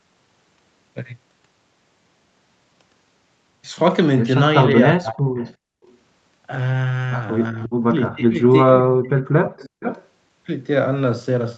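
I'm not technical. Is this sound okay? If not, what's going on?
No. From 4.72 to 5.41 s and from 7.51 to 9.85 s the voice dips sharply or cuts out in pieces. This is likely speech suppressed in double talk: both sides spoke at once, and the echo canceller turned this side's voice down along with the echo.

From 5.40 to 5.97 s and from 9.57 to 10.07 s, a faint delayed copy of the voice comes back, about 0.4 s late. That is likely an echo leak from a loudspeaker.

From 5.69 to 5.83 s the room sound briefly drops out. This is background gated by the echo canceller, which muted the microphone for a moment.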